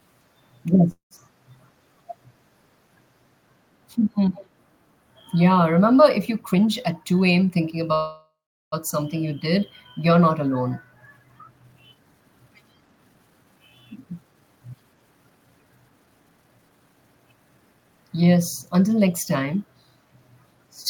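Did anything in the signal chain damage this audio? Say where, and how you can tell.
Yes. Several network and call-processing stages damaged this speech.

Call audio freeze, likely from delayed packets in the network. At 0.91–1.13 s and 7.94–8.74 s the sound decays into silence, then resumes where it stopped.

Background gated by the echo canceller, in call processing. The room sound drops about 6 dB at 1.33–1.46 s and about 7 dB at 1.69–2.59 s.

Echo leak, likely from a far-end loudspeaker. At 4.34–4.46 s a faint copy of the speech, about 25 dB down, trails 164 ms behind.

Jitter buffer speed-up, at the receiver. At 6.46–7.90 s and 13.92–16.95 s the speech runs at 112% with unchanged pitch. Small pieces were trimmed to reduce the backlog.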